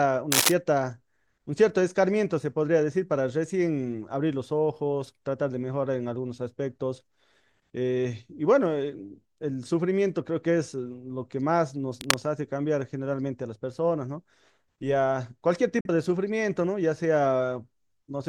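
From 0.32 to 0.52 s and again from 12.01 to 12.19 s, cable scratch noise adds harsh, uneven rustling, first somewhat louder than the speech, then roughly level with it, likely from a worn connector's fluctuating contact. At 15.81 to 15.89 s, a digital broadcast dropout mutes the audio with a quick fade, losing about 43 ms of programme, which fits a single discarded frame.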